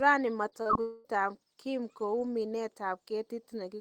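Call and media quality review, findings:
Short concealed packet loss at 0.49–0.54 s: quick smear in the speech, roughly 20 ms of audio missing and patched by jitter-buffer concealment continuing the last sound. Again 0.62–0.67 s, a longer wobble, about 35 ms filled. Straight after, 0.67–0.71 s, another 19 ms patch.

Long network dropout, 0.81–1.07 s: about a quarter second of the speech turns into a drawn-out buzz or hiss continuing the previous sound, then real audio resumes with that stretch gone. No silent gap; the fill runs the whole way. Likely a burst of lost packets on the network path, with the decoder's concealment covering the roughly 240 ms hole.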